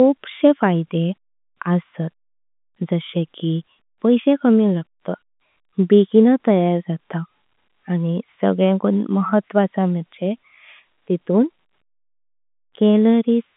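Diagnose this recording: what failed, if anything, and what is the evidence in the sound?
Nothing failed: the speech sits in a telephone band of roughly 150 Hz to 3.6 kHz, as expected from a working G.711 A-law line at 64 kbps, and no stage from the analogue side through to playback shows any fault.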